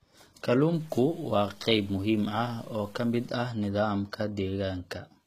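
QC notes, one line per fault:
Throughout: HE-AAC compression, likely the cause. The speech has plainly audible codec damage. Nothing is heard above 14.9 kHz. The treble sounds synthetic. It was rebuilt by copying lower bands upward under a coarse envelope. Its harmonics do not line up with those below the crossover. So s sounds come out gritty, metallic or lispy. The damage fits a low bitrate near 20 kbps.
0.74 to 3.29 s: low bit depth without dither, likely the cause. A grainy distortion sits on the speech across this stretch, roughly 30 dB below the signal. The samples were cut down to very few levels, which fits 8 bits. They were truncated, not dithered. The error therefore tracks the signal. Quiet parts turn rough, and the grit changes as the speech moves.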